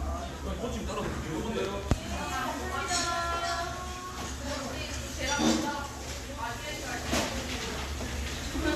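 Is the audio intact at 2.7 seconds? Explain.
Yes, the audio is intact at 2.7 seconds, with no dropout, glitch or other fault at that moment.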